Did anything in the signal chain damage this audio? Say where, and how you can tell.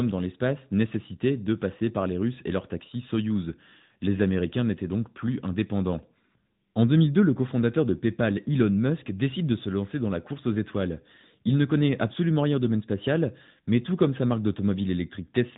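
Yes. Codec stage: AMR narrowband mobile coding throughout cuts everything above 3.8 kHz and leaves the speech plainly buzzy, which fits a mode near 10.2 kbps.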